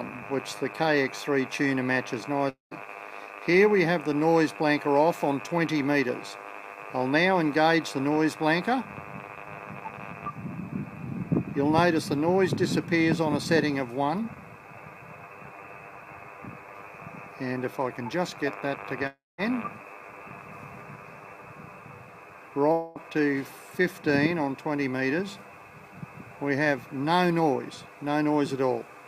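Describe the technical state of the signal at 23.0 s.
A long network dropout runs from 22.72 to 23.00 s. The gap is likely a stretch of lost packets: for about 0.23 s the receiver extends the last sound as a fading buzz, and about 0.24 s of audio never returns when playback resumes.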